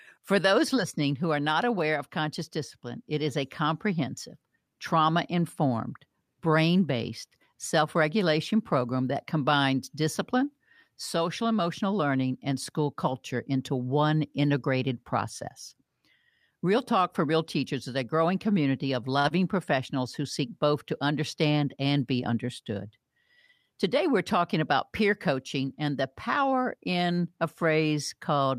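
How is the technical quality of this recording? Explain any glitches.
The recording has three brief network-related glitches, all clustered between about 19 and 22 seconds.

At 19.19 to 19.26 s the speech briefly hangs, one sound held unnaturally long with a faint buzz or dip. This is a short stall from a late packet: the jitter buffer ran dry, so the receiver stretched the last sound for about 49 ms until the packet arrived, then resumed with nothing lost.

Right after, at 19.28 to 19.32 s, there is a tiny smear or wobble. This is short concealed packet loss: about 20 ms of audio never reached the decoder, and the receiver patched the gap by extending the preceding sound before blending back into the real signal.

From 21.36 to 21.77 s the speech sounds hurried but keeps its normal pitch. This is a jitter buffer speed-up: with excess audio queued, the receiver trimmed short pitch-period slices, roughly 40 ms in total, so playback ran at about 109% speed.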